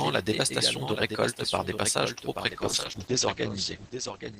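It's a speech clip, and the whole thing carries a doubled audio track: a second, full-band copy trails roughly 0.7 s behind at about 10 dB down, dry and uncoloured, likely from a slower second capture path. Then from 2.52 s, right after "par des passages trop", there's a call bitrate drop through to the end. The top end is cut off at 8 kHz instead of reaching 20 kHz, the sound turns rough and muffled, and it stays at its worst for about 1.75 s. That fits the encoder being throttled from around 32 kbps down to roughly 9 kbps.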